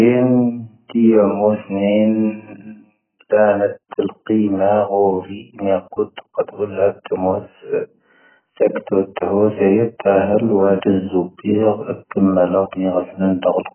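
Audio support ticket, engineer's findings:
Likely AAC compression at a very low bitrate, whole clip. Heavy damage: nothing above 3.1 kHz, dull, smeared speech, warbling on sustained sounds, fizzy sibilants. Sparse quantisation of the frequency lines fits a rate near 9 kbps.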